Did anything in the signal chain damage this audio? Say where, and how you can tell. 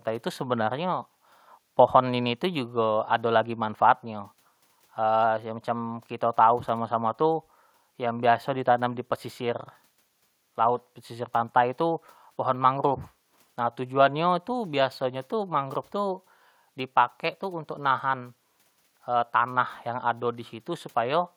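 No, nothing in the signal chain has damaged this speech recording. The only background is the room's own noise, sitting about 45 dB below the speech, which belongs to the recording space rather than to any stage of the system.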